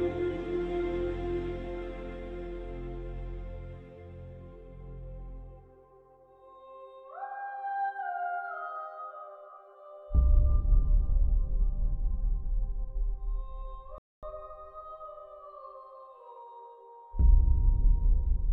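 At 13.98 s the audio drops to silence until 14.23 s, a rebuffering stall: playback exhausted its downloaded data and paused for more. It resumes exactly where it stopped, so nothing is lost, but about 0.25 s of dead air is inserted.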